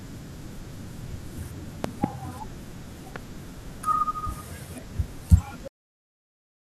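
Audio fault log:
1.84–2.06 s and 3.16–3.18 s: loud pop, a double pop then a single one, about 20 dB and 15 dB over the speech. These are likely voltage transients from a plug, switch or static. They appear as tall spikes on the waveform and thin full-height lines on the spectrogram.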